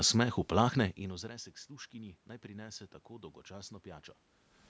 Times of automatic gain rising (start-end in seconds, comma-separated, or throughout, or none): 0.97-4.19